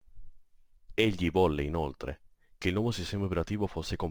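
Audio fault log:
Throughout: crude rate conversion. The speech carries a gritty, inharmonic fizz that rides on top of the louder and brighter syllables, sitting roughly 30 dB under the voice. It sounds like the audio went from 48 kHz down to 44.1 kHz by simply grabbing the nearest sample instead of filtering and resampling properly. The skipped samples fall in a repeating pattern set by that ratio, so you get tones that have nothing to do with the voice's pitch.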